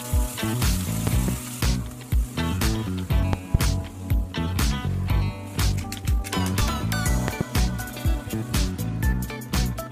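A loud pop, heard as two sharp pulses, hits from 1.07 to 1.31 s, about 15 dB above the sound. Another pair follows from 3.33 to 3.57 s, about 20 dB up. The sound carries on beneath each one. A voltage step, likely from a plug, switch or static discharge, gets added to the signal.

At 6.60 s, compressed frames are skipped. The audio jumps forward by roughly 20 ms, which fits a single dropped frame of 23.2 ms.

A third loud pop, again a double, lands from 7.28 to 7.43 s, about 20 dB above the sound.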